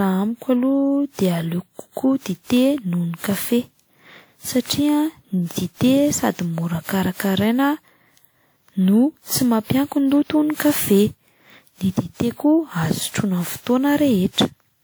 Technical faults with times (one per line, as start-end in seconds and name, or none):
0.00-14.83 generation loss